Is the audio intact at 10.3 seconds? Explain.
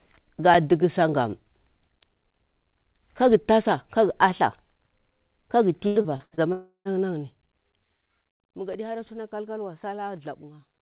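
Yes, the audio is intact at 10.3 seconds, with no fault at that moment.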